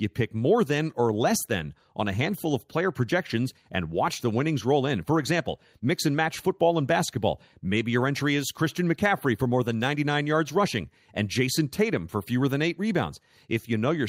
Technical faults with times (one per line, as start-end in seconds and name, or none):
none